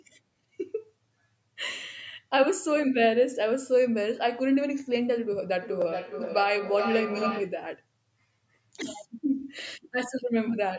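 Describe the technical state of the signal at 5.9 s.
At 5.9 s you're in a feedback echo between two devices, running 5.62 to 7.6 s: one device replays the other's mic, repeating roughly every 400 ms, thinning, peaking about 5 dB under the speech.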